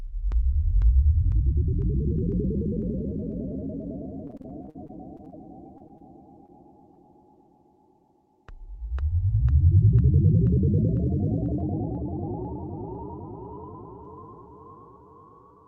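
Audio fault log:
4.27–6.98 s, repeated packet loss (robotic sound). The sound turns choppy. Packets kept going missing, and each hole, the longest about 52 ms, was patched by stretching the last bit of sound. Roughly an eighth of this stretch is filled in this way, so pieces drop out.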